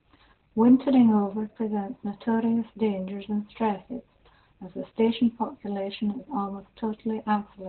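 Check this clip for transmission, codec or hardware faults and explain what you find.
There is one fault, Opus voice compression, present throughout. Throughout the clip, heavy SILK-only narrowband coding, consistent with roughly 8 kbps, cuts everything above 4.3 kHz and coarsely codes the excitation, making the speech muffled, hoarse and slightly robotic. A spectrogram shows a flat ceiling at 4.3 kHz.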